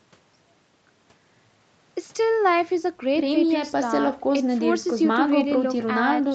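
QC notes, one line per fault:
Nothing to flag here, just speech that has come through an ordinary call chain, with the microphone processing and the Opus call path doing their usual job and nothing above 8 kHz.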